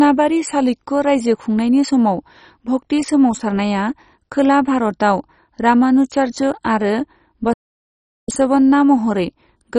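Throughout, the speech bears the marks of MP2 compression, likely at a very low rate such as 32 kbps. The encoder starved its sub-bands of bits, so nothing survives above 10.3 kHz and the remaining bands are coarsely quantised, giving a dull, gurgling, granular sound.

From 7.53 to 8.29 s a playback stall likely occurred, with the player running short of data or its thread blocked. The speech cuts out abruptly for about 0.75 s of silence, then resumes once output recovers.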